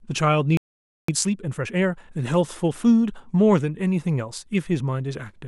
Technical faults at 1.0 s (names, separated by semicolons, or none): playback stall; time-compressed catch-up